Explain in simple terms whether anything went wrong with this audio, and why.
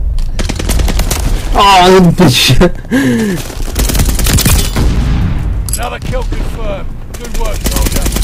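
Something did go wrong: hard clipping runs through the whole recording. The sound was pushed far louder than the recording chain could hold, so its loudest moments were sliced off flat. That makes every loud passage harsh and fuzzy. Unlike warm, gentle overdrive, the edges sound sharp and crackly.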